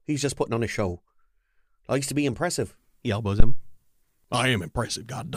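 At 3.40 s a phantom power thump hits the speech. A supply was switched on or off on a live input. The voltage step passed through the coupling capacitors. It sounds like a deep thud peaking near about -3 dBFS, decaying in roughly 57 ms and gone by 3.65 s.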